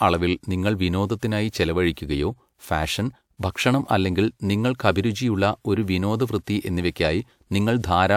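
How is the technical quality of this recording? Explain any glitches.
The recording has audible pre-echo at three points, where a transform codec has smeared noise ahead of sharp speech onsets. Quantisation noise is spread across each coded block, so the quiet moment before a loud attack carries noise meant for the louder part. It comes at 1.93 s, after "അളവിൽ നിങ്ങൾ വിനോദത്തിനായി", lasting about 37 ms; at 3.52 s for about 37 ms; and at 6.91 s, after "ഒരു വിനോദവൃത്തി", for about 48 ms. Each is a brief hiss leading into a softened, blurred attack.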